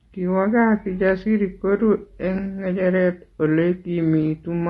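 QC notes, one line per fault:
throughout, low-delay AAC compression: the speech was likely carried by a low-delay AAC codec such as AAC-ELD, and the plainly audible damage fits a tight budget of about 32 kbps. Its short frames hold only about 500 frequency lines, and the few bits left are spread thin. The voice therefore sounds rough and grainy, with noise filling the gaps between harmonics and a dulled or artificial-sounding top band.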